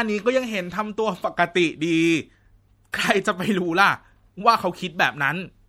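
Lossy coding has likely run short of bits across the whole of this speech recording, and the damage is plainly audible throughout. It points to MP3 compression at a low rate, roughly what a 64 kbps stream would give. The encoder has zeroed weak frequency lines that flick on and off between frames. That leaves the sound watery and swirling, with metallic chirps on s sounds and blurred attacks. At 2.92 s the codec's block-wide quantisation noise has spread backward ahead of a sharp onset, producing pre-echo. The noise budget set by the loud attack also fills the quiet instant before it. The result is a short hiss about 14 ms ahead of the attack, which then arrives softened and smeared rather than crisp.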